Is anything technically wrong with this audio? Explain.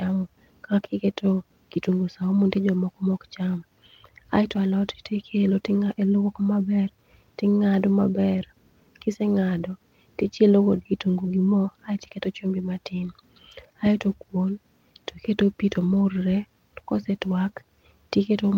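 No, nothing technically wrong stood out on listening to this speech recording.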